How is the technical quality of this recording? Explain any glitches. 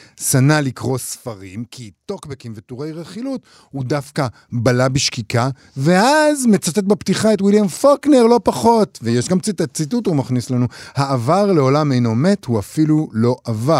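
The recording has zipper noise during two level moves. From 0.6 to 1.36 s the level drops by roughly 10 dB, and from 3.24 to 4.48 s it rises by a similar amount. Each change is applied in unsmoothed steps, around 30 per second and then around 20 per second, so every jump leaves a tiny click. The result is a fast ticking riding on the speech while the level moves. The regular, evenly spaced ticks set it apart from a clean fader move.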